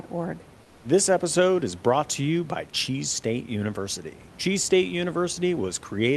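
From 0.63 to 0.83 s there's comfort noise in place of the background: for about 200 ms the real room sound, sitting about 30 dB below the loud parts, gives way to a flat, featureless hiss roughly 2 dB quieter. The likely cause is Opus DTX pausing transmission while the receiver synthesises filler noise, all on a call path band-limited to about 12 kHz.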